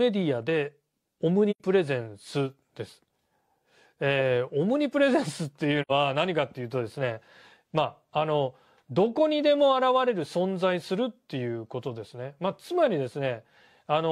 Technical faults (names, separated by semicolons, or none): AAC frame loss with muting